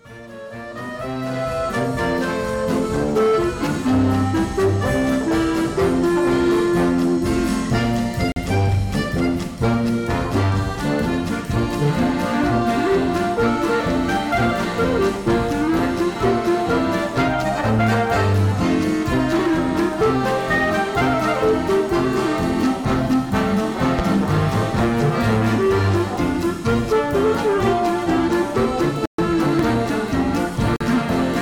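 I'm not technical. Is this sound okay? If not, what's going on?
No, there are two kinds of fault. Blocks of digital silence occur at 8.32 s and 30.76 s (each about 43 ms, a length that fits a 2048-sample buffer) and at 29.06 s (128 ms). Each time, the program likely failed to deliver audio in time, so the sound drops to nothing and back abruptly.

Loud pops occur at 23.99 s and 29.59 s: a single sharp pop each time, well above the level of the sound, which keeps playing underneath. The likely cause is a sudden electrical jolt, such as a plug, a switch or static, reaching the signal.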